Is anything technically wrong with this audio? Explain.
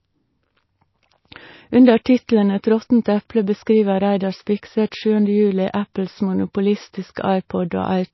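Yes. Throughout the speech, nothing sounds above 5.8 kHz, and the sound has a plainly audible watery, swirling quality with smeared attacks. This is likely MP3 compression starved of bits, which fits a rate near 24 kbps. The encoder chopped off the treble and switched weak frequency lines on and off from frame to frame.

Pre-echo occurs at 2.04 s and again at 5.73 s. A sharp attack landed late in a transform block, so quantisation noise sized for the loud part spread backward into the quiet moment before it. Each attack gets a brief hiss about 13 ms ahead of it and sounds softened.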